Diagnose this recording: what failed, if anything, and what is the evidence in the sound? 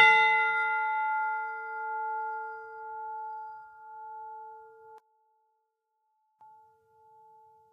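From 4.98 s to 6.41 s the music drops by about 23 dB to a faint copy. Then it returns at full level. This is the sound of one channel inverted and summed to mono. Whatever both channels share cancels, including centred parts and bass. Only the difference between left and right survives. The stage is likely the analogue wiring, where one leg of a balanced or stereo connection had its polarity reversed during that span.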